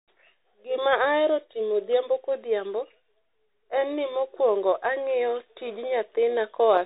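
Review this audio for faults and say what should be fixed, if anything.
Bluetooth CVSD headset codec damage runs through the whole speech clip. Nothing passes above 4 kHz, so the sound is muffled. The one-bit delta steps can't keep up with loud high sounds, which distort. S sounds turn scratchy over a granular hiss. This fits a 64 kbps CVSD link. To prevent it, record on a wired microphone or a wideband Bluetooth mode rather than the narrowband headset profile.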